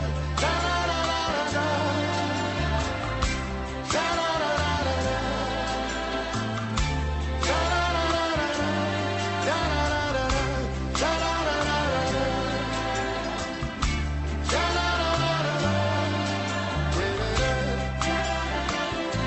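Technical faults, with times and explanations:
No technical faults are heard, so there are no times or explanations to give.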